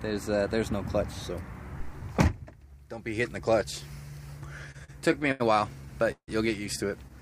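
Repeated stalls (stutter) run from 4.71 to 5.42 s: seven short breaks, the longest 82 ms, fill about a quarter of that stretch with held-over sound, 184 ms in all. Late packets kept draining the jitter buffer, so the audio drags and stutters while nothing is lost.

A call audio freeze at 6.12 to 6.30 s holds the sound for 162 ms, trailing into about 80 ms of silence before it resumes where it stopped, now 162 ms later. The likely cause is packets held up in transit, emptying the jitter buffer.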